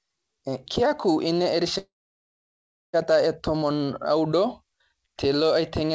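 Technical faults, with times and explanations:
1.78–2.95 s, call audio freeze: the speech stops and the last bit of sound smears into a short fading buzz, then there's about 1.05 s of dead silence before it picks up exactly where it left off. Nothing is lost, but everything after arrives about 1.16 s late. The likely cause is packets stalling in transit so the jitter buffer ran dry. The band tops out at 8 kHz, which fits a G.722 call path.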